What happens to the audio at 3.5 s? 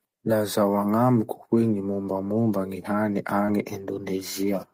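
Just before 3.5 s the speech briefly smears or wobbles, from about 3.45 to 3.49 s. This is short concealed packet loss: a 20 ms stretch of the call arrived too late for the decoder, so the receiver stretched out the preceding sound to cover the gap, carrying its pitch forward if it was voiced or substituting shaped noise if it was not, and then cross-faded back into the real signal as it resumed.

Overlapping the end of that span, from about 3.47 to 3.49 s, a single 20 ms frame sounds rougher and noisier than its surroundings, though there is no dropout. That is a lost packet rebuilt from error correction. The packet went missing, but the one after it carried a low-bitrate duplicate through Opus in-band forward error correction. The decoder played that coarser copy instead of leaving a hole, which is why the frame keeps going but loses detail.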